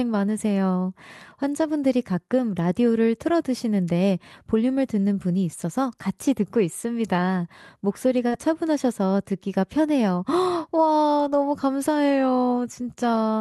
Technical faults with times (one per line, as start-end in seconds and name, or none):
8.27-8.34 short concealed packet loss